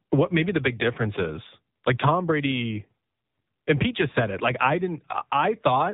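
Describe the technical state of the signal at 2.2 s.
At 2.2 s, as throughout, the speech carries AMR narrowband mobile codec damage. Nothing passes above 4 kHz, and a low bitrate renders the voice through a vocal-tract model, giving a buzzy, synthetic texture that plain low-pass filtering would not produce.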